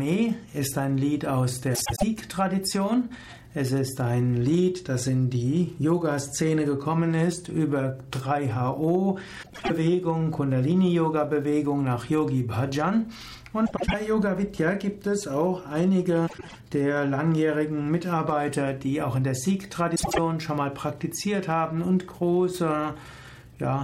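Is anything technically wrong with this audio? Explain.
Yes. Frames out of order occur at 1.75–2.03, 9.43–9.71, 13.66–13.94, 16.27–16.55 and 19.95–20.19 s. Each time, two adjacent blocks of about 105 ms (78 ms in the last) swap places, producing a garbled flutter. Unlike a dropout or skip, nothing goes missing and the timing stays intact.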